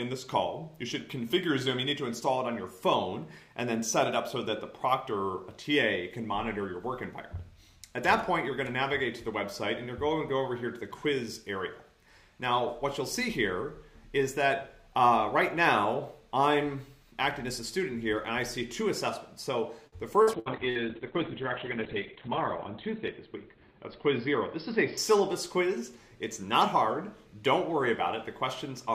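Around 19.87 to 20.78 s there's repeated packet loss, and it gives the sound that choppy, robotic edge. What sounds like four short dropouts, the longest about 64 ms, get papered over by stretching the last bit of sound, so roughly a quarter of that stretch is patched.

Overlapping that from 20.34 s until 25.52 s is a call bitrate drop. The encoder gets starved, and the coarse, watery sound points to a fall from around 96 to 7 kbps. Highs cut off at 4 kHz instead of 20 kHz, and it's at its worst for about 2.1 s.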